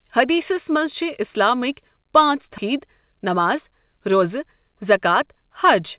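Speech over a narrowband call path, with nothing above 4 kHz, which fits G.711 mu-law. At 2.58 s there's a skip ahead: roughly a second of audio gets dropped with no fill, so playback jumps straight forward. From 4.69 s to the end, a jitter buffer speed-up trims pitch periods, around 70 ms in total, so the speech runs about 6% faster at unchanged pitch.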